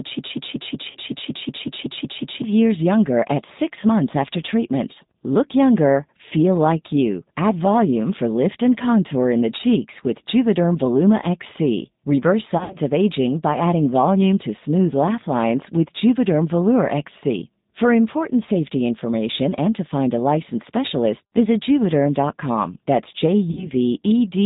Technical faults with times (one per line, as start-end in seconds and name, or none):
0.00-24.45 G.729 codec
0.91-0.98 VoIP packet loss concealed by the speech codec
12.58-12.77 VoIP packet loss concealed by the speech codec
23.51-23.70 VoIP packet loss concealed by the speech codec